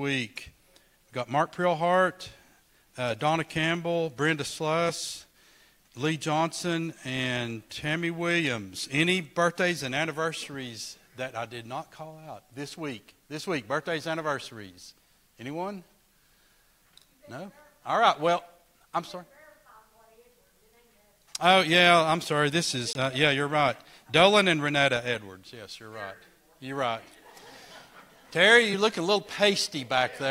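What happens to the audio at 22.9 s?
At 22.93 to 22.95 s the sound drops out for about 21 ms and then picks straight back up. That's a Bluetooth stall: radio interference likely held back packets, the headphones' buffer ran empty, and playback sat silent until the resent data arrived.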